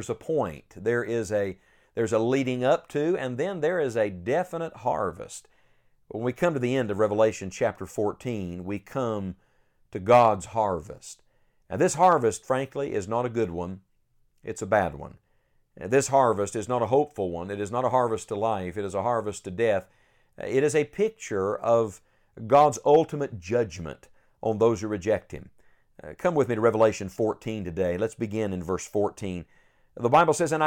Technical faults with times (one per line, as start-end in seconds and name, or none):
none